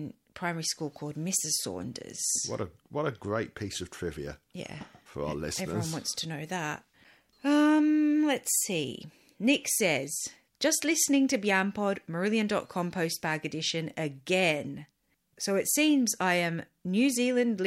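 No technical faults are audible anywhere in the speech recording.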